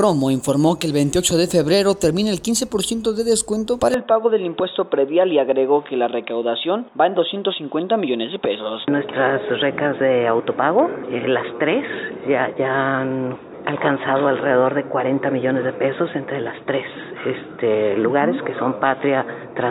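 At 3.94 s the sound abruptly turns dull and boxy and stays that way to the end, with no gap at the change and little shift in loudness. This is likely an input switched to a poorer device: the new capture path passes a narrower band, so nothing above 3.8 kHz survives. On a spectrogram the upper region goes empty along a hard horizontal edge from that moment, with a faint new noise floor far below the signal.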